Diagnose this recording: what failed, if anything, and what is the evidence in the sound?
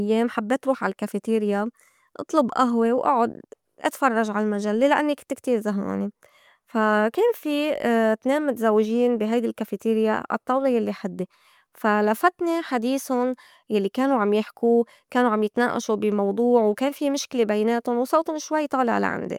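Nothing failed; there is no evidence in the sound of a fault at any stage.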